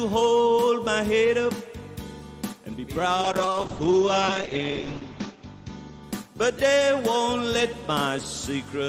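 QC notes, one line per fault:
3.24–6.83 s, call bitrate drop: the call's bandwidth estimate collapsed and the encoder was pushed onto a much smaller bit budget, consistent with a fall from around 48 kbps to about 8 kbps. With so few bits, Opus codes the sound coarsely and narrows its band from 20 kHz down to 8 kHz, so the audio turns muffled and rough, with a watery smear. The worst stretch lasts about 1.78 s before the top end and detail return.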